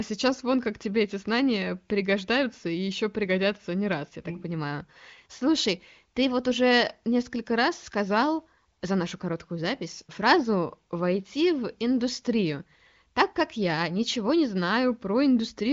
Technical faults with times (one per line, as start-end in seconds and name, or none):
none